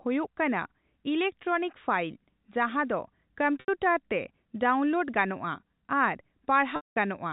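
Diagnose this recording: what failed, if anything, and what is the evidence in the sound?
The network stage failed: packet loss with pitch repetition, with the receiver's concealment filling the gaps. At 3.60 s there's an 80 ms hole where the last pitch period gets repeated, so you hear a brief held, buzzy tone that thins out just before "ᱛᱮ ᱰᱟᱣᱩᱱᱞᱳᱰ". At 6.76 s a 200 ms loss runs past the roughly 50 ms fade, so the buzz dies into silence and the speech cross-fades back in around 6.96 s. The G.711 telephone band carries this cleanly.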